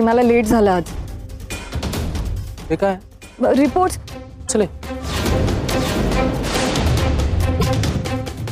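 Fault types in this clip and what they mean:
Damaged data in a compressed stream: the decoder misreads corrupted frames, giving 30 to 45 ms glitches at 0.50, 4.46 and 7.59 s.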